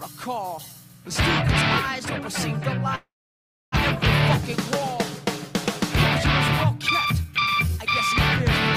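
At 2.95 s the audio breaks into a fading buzz or hiss that soon gives way to near-silence for about 650 ms, resuming at 3.76 s with roughly 600 ms of material gone. This is a long network dropout, likely a packet loss burst: the receiver stretched the last sound, then fell quiet, and rejoined about 150 ms later in time. From 6.70 s to 7.78 s the sound runs noticeably hurried at an unchanged pitch, about 106% speed. That is a jitter buffer speed-up, with the receiver cutting short pitch-period pieces, around 70 ms in total, to shed the extra buffered delay.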